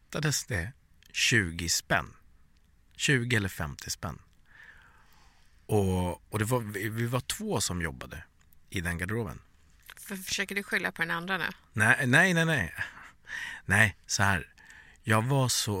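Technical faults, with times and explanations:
Nothing in the speech stood out as a technical problem on listening.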